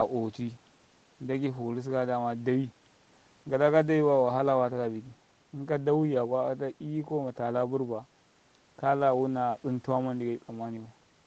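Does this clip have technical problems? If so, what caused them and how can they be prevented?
No, the speech shows no technical faults; it has the sound of a normal call path, with the lowest bass trimmed by the microphone processing and nothing above about 8 kHz, which fits a wideband Opus call at around 24 kbps.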